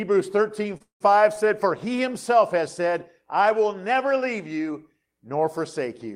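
At 0.77 s a short stall from a late packet holds the sound for 29 ms. The jitter buffer emptied, so the last sound stretched. Nothing is lost.

From 0.82 to 1.02 s a call audio freeze follows. The sound turns to a fading buzz or hiss, then about 130 ms of silence, before resuming where it stopped. Delayed packets likely emptied the buffer.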